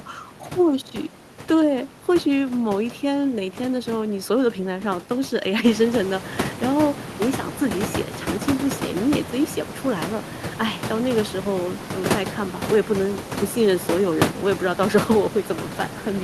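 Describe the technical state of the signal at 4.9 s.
At 4.9 s the signal is intact, with no technical fault in the audio path.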